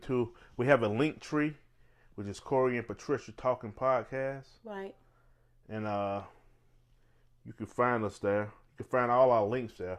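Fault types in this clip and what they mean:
No faults can be heard.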